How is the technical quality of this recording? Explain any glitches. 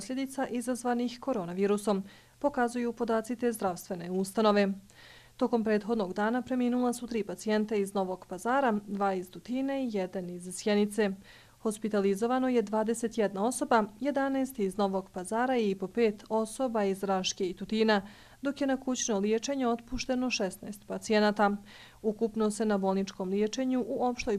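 No glitches or technical faults can be heard here.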